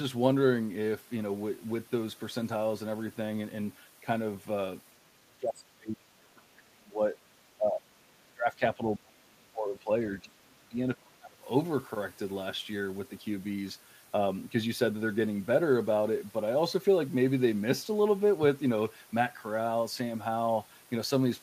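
From 5.28 to 7.16 s, 7.57 to 7.92 s, 8.24 to 9.9 s, 10.19 to 10.79 s and 10.95 to 11.45 s, the speech is suppressed in double talk. It drops by roughly 30 dB, about 25 dB in the second dip. An echo canceller likely mistook it for far-end echo.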